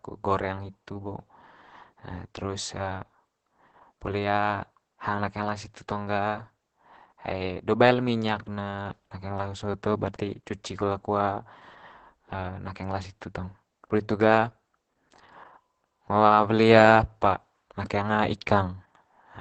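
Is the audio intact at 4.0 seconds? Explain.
No. At 4.0 seconds the speech carries Opus voice compression, as it does for the whole clip. The SILK coder has cut the band to about 8 kHz and coded the excitation coarsely. That leaves the speech muffled, hoarse and faintly robotic, which fits a bitrate near 10 kbps.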